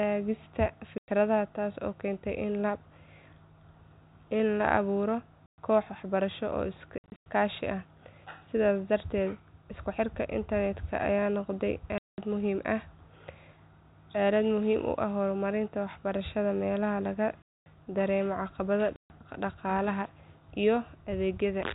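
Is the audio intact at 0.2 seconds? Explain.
Yes, the audio is intact at 0.2 seconds, with the speech carried cleanly through its G.711 telephone coding and no fault at that moment.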